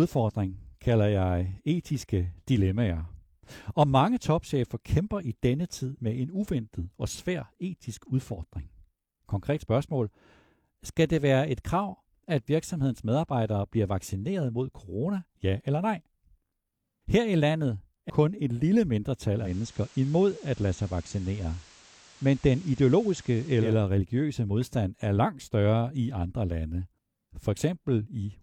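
A CD skip at 18.10 s, right after "i landet", cuts in with a tick and a mute of only a few milliseconds. A knock or a disc flaw threw the laser onto another turn of the spiral, so playback resumes out of place before "kun et lille".

Digital radio blending to analogue runs from 19.35 s to 23.77 s, between "kun et lille" and "religiøse modstand er langt". The receiver lost the digital stream and cross-faded over 216 ms to the station's FM broadcast, bringing hiss about 25 dB below the signal, with no change in level.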